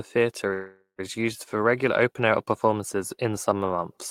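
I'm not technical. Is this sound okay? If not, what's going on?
No. From 0.53 to 1.00 s there is a call audio freeze: the last sound is stretched into a fading buzz that falls silent briefly, then the speech resumes where it left off. Nothing is lost, but everything after arrives about half a second late. Likely cause: delayed network packets.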